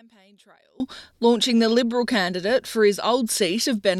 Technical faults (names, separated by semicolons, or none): one channel inverted